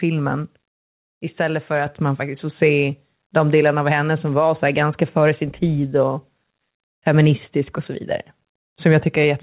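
At 1.86 s, the microphone volume steps up by about 5 dB in one jump. Voice and background get louder together. Throughout, nothing sounds above 4 kHz.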